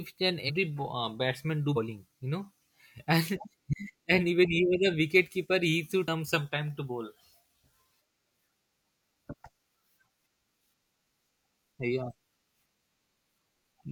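At 0.45, 1.73, 3.69, 6.04 and 9.28 s, compressed frames are skipped: three or four 42.7 ms frames, roughly 150 ms of speech, never play. Each jump leaves the speech skipping ahead, seen on a spectrogram as harmonics shifting abruptly at the seam.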